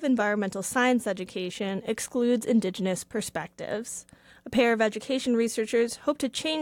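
Nothing in this one jumps out as a technical problem, so there's really nothing to flag here.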